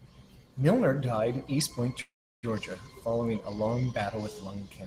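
At 2.01 s the speech halts in a call audio freeze until 2.45 s. The last sound fades as a buzz or hiss into 320 ms of silence. Speech resumes at "following a long battle" 415 ms late, with nothing lost. Delayed packets likely emptied the jitter buffer.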